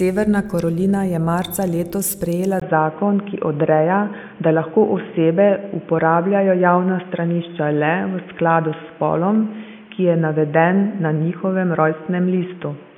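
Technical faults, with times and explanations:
2.6 s to end, input switched to a poorer device: just after "je marca letos sprejela" the speech drops out for about 20 ms, then returns dull and boxy at the same loudness, with new background noise sitting roughly 30 dB below it. The likely cause is a change to a narrower-band microphone or headset profile. On a spectrogram, energy above 3.5 kHz vanishes abruptly at the switch; the waveform shows a brief flat gap but no change in amplitude.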